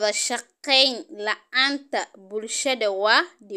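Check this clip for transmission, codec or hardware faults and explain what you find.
No faults turn up in this clip.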